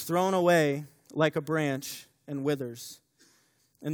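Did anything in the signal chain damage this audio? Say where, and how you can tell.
No, nothing in the signal chain damaged this audio.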